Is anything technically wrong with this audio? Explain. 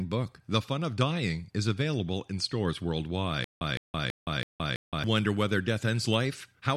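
Yes. The stream likely stalled from 3.44 to 5.04 s, producing a stutter with silent gaps: one 161 ms fragment repeats five times between 168 ms silences.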